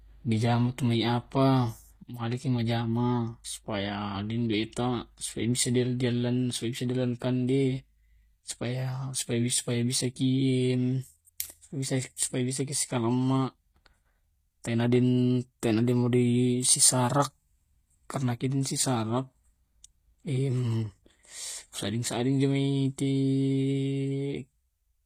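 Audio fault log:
Throughout: HE-AAC compression, likely, at what sounds like a low bitrate near 24 kbps. Codec damage is plainly audible: the treble above the coded band is rebuilt by copying lower speech bands upward under a coarse envelope, so its harmonics fail to line up and s sounds come out gritty and metallic. A spectrogram would show repeated, smeared high-band texture over the lower bands and nothing above 15.5 kHz.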